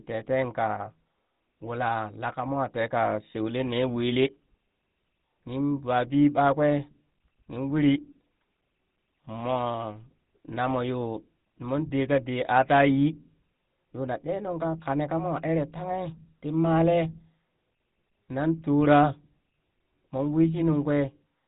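From start to finish the speech carries the signature of the GSM full-rate codec, at a bitrate that fits the 13 kbps of that standard. The codec rebuilds each voice from a vocal-tract model excited by a sparse, regularly spaced pulse train, so the result sounds plainly buzzy and gravelly. A spectrogram shows nothing above about 3.8 kHz, with smeared, comb-like harmonics below, while the waveform looks coarse and pulse-driven.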